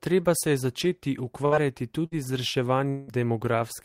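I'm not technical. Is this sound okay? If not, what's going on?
No. Twice, a burst of packet loss occurred: a short run of the data carrying the speech was lost or arrived too late to play. Right after "se je začeti", at 1.45 to 1.55 s, and again at 2.06 to 2.14 s, the player stretches the last sound for about 60 ms into a brief buzz or hiss, then jumps ahead with about 60 ms of speech gone.

From 2.89 to 3.11 s, the cause is likely a long network dropout, where nothing arrives for a longer stretch. The last sound is drawn out and fades for about 180 ms, and the speech resumes with about 180 ms missing.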